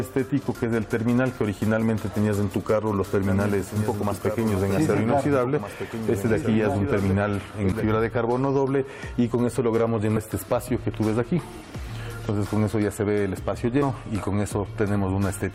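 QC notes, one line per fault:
3.27–7.84 s, doubled audio track: likely a second, slower capture path mixed in, so a dry copy about 10 dB quieter trails roughly one and a half seconds behind, starting and stopping abruptly.
7.72 s, 10.16–10.18 s and 13.81 s, damaged data in a compressed stream: corrupted frames make the decoder lose sync and hunt for the next header, producing brief chirps or blips.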